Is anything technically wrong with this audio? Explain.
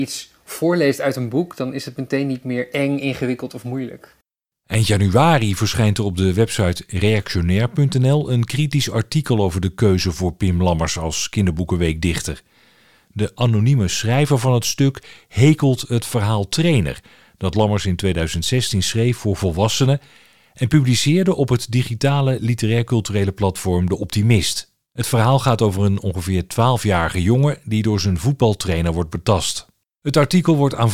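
No, I hear no technical fault anywhere in this speech recording.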